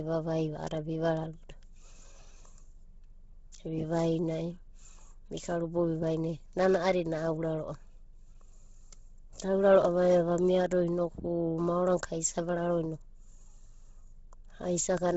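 Throughout, likely Bluetooth LC3 compression at a starved bitrate, fitting about 16 kbps, removes everything above 7.7 kHz and leaves the speech breathy and grainy.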